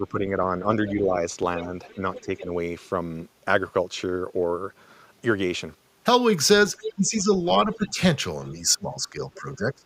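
A speech recording in which the talker's level repeatedly sinks while a second voice is present, likely an echo canceller's response to both sides talking at once. This is speech suppressed in double talk, heard from 0.0 to 1.16 s, 1.67 to 2.52 s, 6.78 to 7.32 s, 7.64 to 7.98 s and 8.52 s to the end. The dips are shallow early, about 5 dB, and deepen to about 20 dB later. Unlike a network dropout, they track the other side's activity rather than cutting cleanly to silence. That other side's voice leaking through is audible at 1.57 to 2.41 s (about 15 dB under the talker), 6.83 to 7.22 s (about 10 dB under) and as a brief scrap at 9.35 to 9.4 s (about 25 dB under), likely loudspeaker pickup the canceller left behind. It is a distinct second voice, not a delayed copy of the talker as room echo would be.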